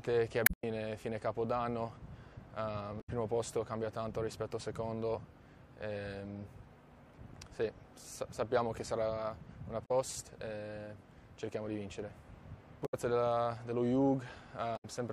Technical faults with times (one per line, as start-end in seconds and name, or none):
0.43-0.64 damaged data in a compressed stream
2.97-3.09 damaged data in a compressed stream
9.82-9.91 damaged data in a compressed stream
12.82-12.94 damaged data in a compressed stream
14.73-14.85 damaged data in a compressed stream